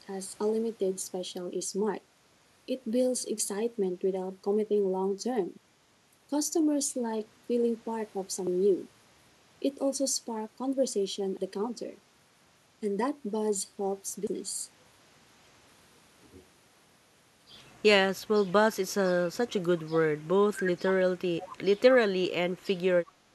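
At 20.21 to 20.25 s and again at 22.08 to 22.16 s, the echo canceller likely mistook overlapping talk for echo: speech suppressed in double talk, dipping sharply, up to roughly 25 dB. At 21.4 to 21.49 s, an echo leak likely let residual loudspeaker pickup through: a faint copy, about 20 dB down, trailing 211 ms behind.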